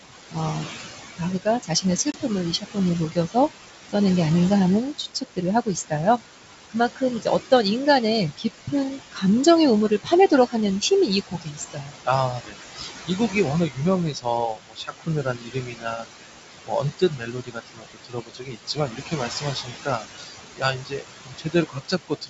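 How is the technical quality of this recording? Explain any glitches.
The recording is speech with processing faults: a noise suppressor pumping throughout, repeated cutting of quiet speech, and one short dropout.

Noise suppressor artifacts run through the whole clip. The suppressor pulls down bands it judges to be steady noise by about 16 dB, frame by frame. The room noise, about 9 dB under the speech, drops away in pauses and swells under talking.

Speech is cut by the noise suppressor in four stretches: 1.17–3.95 s, 4.95–7.52 s, 8.37–16.06 s and 16.66–22.29 s. Quiet consonants and word endings are mistaken for noise and attenuated by about 17 to 19 dB. This adds up to roughly half a second in each of the first two stretches and around three seconds in each of the later two, so syllables sound swallowed.

Packet loss on an ADPCM call occurs at 2.12 s. A hard-edged 20 ms silence, consistent with a single lost packet, replaces the audio. 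The decoder's predictor and step size lose sync with the sender, so the speech comes back with brief distortion before settling. The wideband G.722 coding, consistent with 64 kbit/s, keeps the upper range clear.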